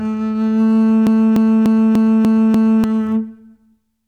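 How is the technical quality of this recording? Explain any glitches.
The recording has one glitch. From 1.07 to 2.84 s, a broken-record loop: playback likely stalled, resending one 295 ms fragment six times back to back, so the intended music is lost.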